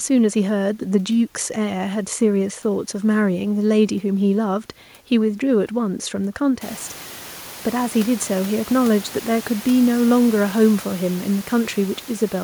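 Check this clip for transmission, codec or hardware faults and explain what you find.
No transmission, codec or hardware fault can be heard in the signal; the background noise of the room steps up by about 19 dB at around six and a half seconds and stays about 20 dB below the speech, which is part of the acoustic recording rather than anything introduced by the system.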